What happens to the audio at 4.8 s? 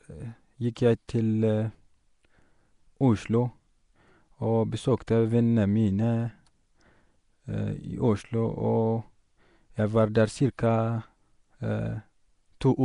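At 4.8 s the speech carries the rough, hissy, underwater smear of Nellymoser compression, likely from Flash's Asao codec at around 44 kbps, present throughout the clip. Starved bands are noise-filled in coarse blocks, and a spectrogram shows grainy patches with nothing above 10.6 kHz.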